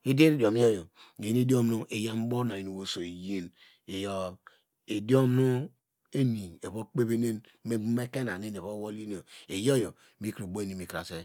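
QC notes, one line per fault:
No audible faults found in this speech recording.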